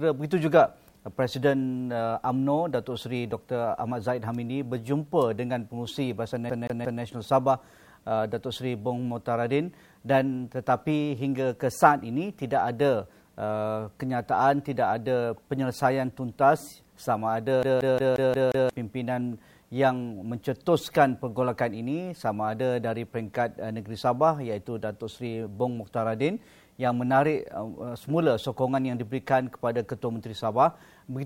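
A scratch makes the laser jump back one track each revolution, so the audio shows a CD stuck on one turn: a 178 ms fragment stutters, with brief mutes, three times from 6.50 to 7.03 s and six times from 17.63 to 18.69 s.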